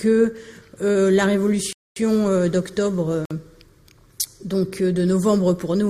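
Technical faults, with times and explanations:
1.73 to 1.96 s and 3.25 to 3.31 s: block of digital silence. The audio drops to silence for about 235 ms, then about 53 ms. There is no fade. The longer block is heard as a hole. The shorter one is more like a short hole.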